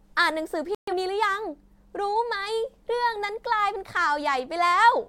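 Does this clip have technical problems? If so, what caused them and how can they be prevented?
Yes. A digital broadcast dropout mutes the speech from 0.75 to 0.93 s. The receiver likely lost corrupted frames, fitting about three, and silenced them. Stronger signal reception and robust error correction prevent this.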